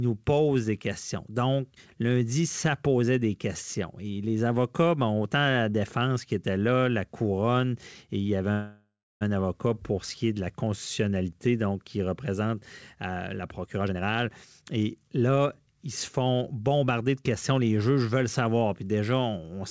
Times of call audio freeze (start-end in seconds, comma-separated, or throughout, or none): 8.52-9.23